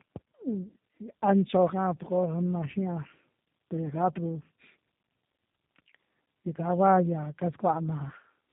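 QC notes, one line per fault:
throughout, tandem speech coding: the speech passes through two low-rate speech codecs in a row, likely an AMR-type coder and then a G.729-type coder, with a transcoding stage between them. The second coder re-encodes the first coder's already degraded output, so the errors stack into a rough, warbly, muffled sound, and nothing is present above 3.8 kHz.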